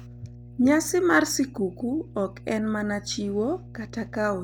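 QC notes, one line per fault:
Throughout, mains hum: a steady 60 Hz tone about 20 dB below the speech, from power-line coupling into the signal, such as a ground loop.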